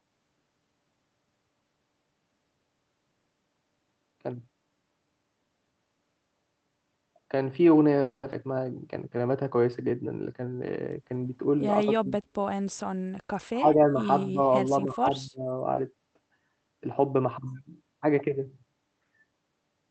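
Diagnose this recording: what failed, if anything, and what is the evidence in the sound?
Network and jitter buffer: at 8.01–8.25 s the sound stalls into a fading buzz or hiss for about 220 ms, likely a call audio freeze from delayed packets, resuming where it stopped.

Jitter buffer: at 8.31–8.34 s playback jumps abruptly forward, roughly 150 ms of audio gone. This skip ahead came from dropping audio while later packets were already queued.

Jitter buffer: from 9.17 to 11.20 s the audio drags at 94% speed with unchanged pitch, a jitter buffer slow-down that repeated pitch periods or bits of pauses to add 124 ms of reserve.

Call processing: the talker dips or breaks up at 12.00–12.43, 13.53–14.03, 14.33–14.51 and 14.70–15.54 s, by about 40, 10, 10 and 20 dB. This is likely speech suppressed in double talk by the echo canceller.

Network: a brief smear at 15.73–15.79 s marks short concealed packet loss. 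About 40 ms never arrived and was filled by extending the preceding sound.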